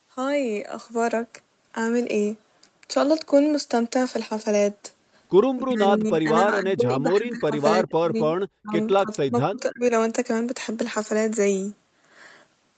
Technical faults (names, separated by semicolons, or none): speech suppressed in double talk